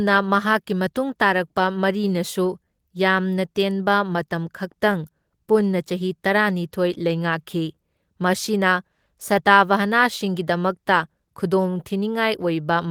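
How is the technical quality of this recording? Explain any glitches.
The speech carries a steady timing problem rather than dropouts or noise.

Clock drift between sender and receiver runs throughout: the sender's clock is roughly 2% slow, so the receiver's buffer keeps draining, unlike random packet loss, which leaves gaps.

Repeated timing corrections from 0.36 to 12.87 s pad the speech with short repeated pieces, about 200 ms in total. The pace drags to about 98% with uneven small hiccups, not smooth pitch wobble.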